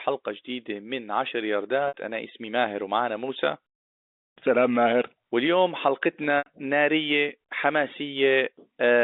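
Speech on a G.711 telephone-band line, with two dropouts from packet loss with pitch repetition, at 1.88–1.94 s (60 ms) and 6.38–6.46 s (80 ms). Each time the last pitch period repeats as a brief buzzy hold, fades to silence within about 50 ms, then speech cross-fades back.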